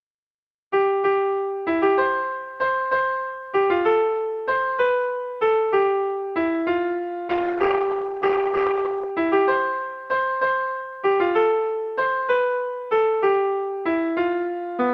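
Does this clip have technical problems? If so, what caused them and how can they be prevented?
Yes, there's a call bitrate drop from 7.29 to 9.17 s. The sound turns rough and muffled for about 1.8 s, then clears up. What you're hearing is the call's bandwidth estimate falling, so the encoder got squeezed to far fewer bits and coded everything more coarsely, trimming the top end too. The change in quality fits a drop from roughly 48 kbps down to 16 kbps before it recovered. To prevent it, give the call a steadier connection, such as wired or less congested Wi-Fi, so the bandwidth estimate doesn't dip.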